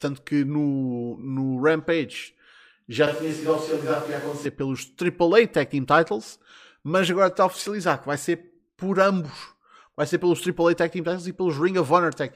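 At 3.07 to 4.46 s the speech abruptly turns hollow, with room noise about 20 dB below it, likely a switch to a distant microphone.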